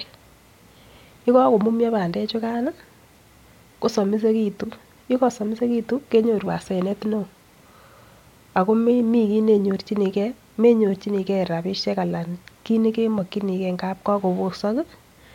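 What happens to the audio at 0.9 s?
Nothing goes wrong at 0.9 s; the speech carries on intact through that moment with no audible fault.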